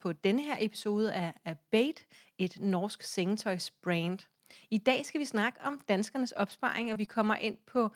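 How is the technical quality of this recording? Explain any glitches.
The recording has a burst of packet-loss damage in its last two seconds, starting just after "skal vi snakke om".

Lost packet rebuilt from error correction: ten 20 ms frames between 6.27 and 7.75 s were decoded from low-bitrate redundant copies in the following packets. There are no gaps, but these frames are briefly rougher and noisier.

Short concealed packet loss: at 6.93–6.97 s and 7.05–7.09 s, about 20 ms went missing. The decoder extrapolated the preceding sound and blended back, producing a brief smear or wobble.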